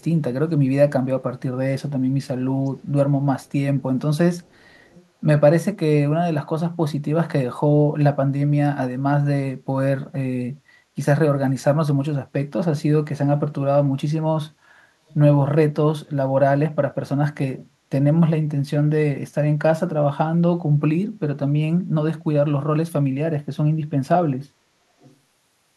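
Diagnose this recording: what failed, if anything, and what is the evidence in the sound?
The failure is an echo leak in call processing: a delayed copy of the speech comes back very faintly, roughly 30 to 40 dB below the main voice, in short scraps at 0.0 to 0.04, 2.65 to 2.86, 3.42 to 3.52, 4.39 to 5.06, 15.08 to 15.14 and 25.0 to 25.16 s. It is likely a far-end echo canceller letting loudspeaker pickup through. Unlike room reverberation, the copy is discrete, trails by a fixed 456 ms each time, and appears only intermittently.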